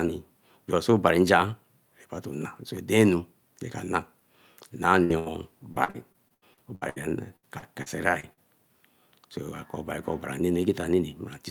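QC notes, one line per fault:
5.03–5.14 s and 5.19–5.28 s, burst of packet loss: consecutive packets went missing, about 60 ms then 80 ms of speech, bridged by a held, fading continuation before the audio skips ahead.
5.72–6.98 s and 7.36–8.39 s, repeated packet loss (robotic sound): nine then five gaps, up to about 76 ms then 67 ms, patched by extending prior sound, giving choppy speech with pieces missing.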